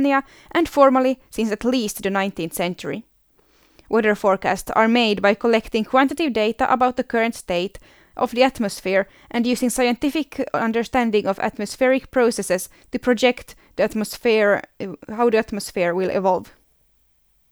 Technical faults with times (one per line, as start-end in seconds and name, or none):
none